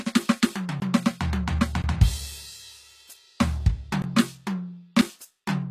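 Music whose treble sounds plainly coded: everything above 14.9 kHz is missing, and the upper range that remains has the grainy, metallic quality of a copied rather than recorded top end. The likely cause is HE-AAC compression at a low bitrate, around 24 kbps. The codec keeps only the lower spectrum and rebuilds the highs by replicating lower bands upward under a coarse envelope, so the upper harmonics don't match the originals. The sound also drops out abruptly in short holes at 0.80 to 0.82 s, 1.82 to 1.84 s and 4.02 to 4.04 s, each 20 ms long, with no fade in or out. A shorter 7 ms gap at 5.01 s is too brief to register as silence and comes across as a tick or dip. Each is a block of digital silence, where zeros were output instead of audio, either because the output buffer wasn't filled in time or because a calculation produced invalid values.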